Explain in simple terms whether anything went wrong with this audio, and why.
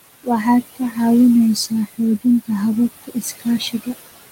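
Yes, there's one problem, and it runs through the whole clip: noise suppressor artifacts. A filter meant to cut the room's background noise is pushing it down hard between phrases, then letting it creep back under the speech.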